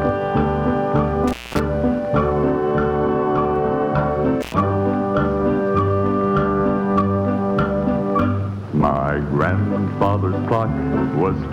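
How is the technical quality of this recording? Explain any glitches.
The recording has two dropouts from intermittent contact. At 1.28–1.60 s and 4.41–4.54 s, a loose connection opens for about 0.23 s and 0.1 s, cutting the sound to faint hiss with crackle at each edge.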